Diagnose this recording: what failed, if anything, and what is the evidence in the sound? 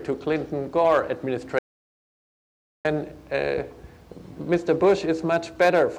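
The input stage failed here, with an audio dropout to silence. At 1.59 s the sound cuts off mid-flow. It returns abruptly at 2.85 s. The gap lasts about 1.26 s and is silent. No room tone or noise floor survives inside it. That points upstream of the recorder. The input was likely lost through a disconnected device, a failed link or a stray mute, while the recorder kept writing silence. Whatever sounded in that gap is gone.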